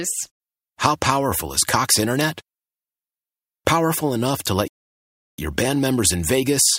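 At 4.68 s the speech halts mid-flow in a playback stall, resuming at 5.38 s after 0.70 s of silence. The player likely starved of data or was blocked. The waveform goes flat there, leaving a blank vertical band on the spectrogram.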